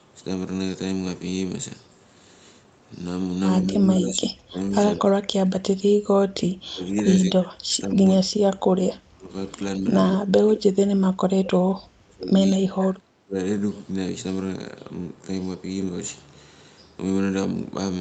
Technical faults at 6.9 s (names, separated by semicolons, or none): speech suppressed in double talk; echo leak